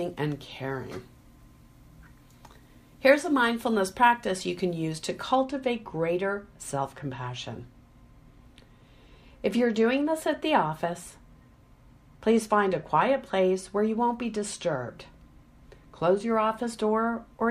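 From 5.35 s to the end, de-emphasis applied wrongly: an unneeded treble cut slopes the response down, about 8 dB lower at 10 kHz, leaving the sound dull and muffled.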